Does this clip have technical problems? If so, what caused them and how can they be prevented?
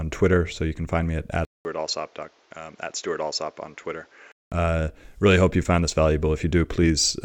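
Yes. Right after "can find me at", there's about 200 ms of silence, then from 1.45 to 4.52 s the speech turns dull, nothing above 7.6 kHz, roughly 10 dB quieter, with a new noise floor. Likely the input switched to a poorer device. Lock the recording input so it can't change mid-take.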